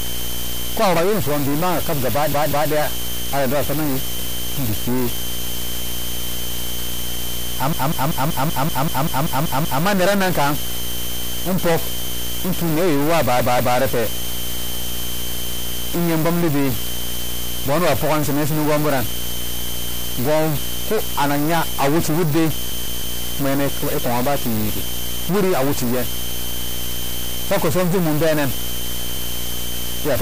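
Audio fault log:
Throughout: video or display buzz. A screen or video cable couples into the speech, adding a steady buzz at the 59.94 Hz field rate with hash above it and a thin, very high whine at the 15.7 kHz line rate, sitting about 20 dB below the signal.
Throughout: stuck bit. The speech carries distortion, and the pauses fill with noise instead of going quiet. This most likely comes from one data bit held at a fixed value by a broken line or converter, which throws about half the samples off by that bit's weight.
2.32–2.71 s, 7.73–9.84 s, 12.08–12.14 s, 13.39–13.78 s, 22.70–23.18 s: repeated frames. Blocks of compressed frames play again, each run stuttering. A 192 ms block sounds twice more at 2.32 s and 13.39 s and eleven more times at 7.73 s, a 64 ms block repeats once at 12.08 s, and a 160 ms block three more times at 22.70 s, adding roughly 3.4 s in all.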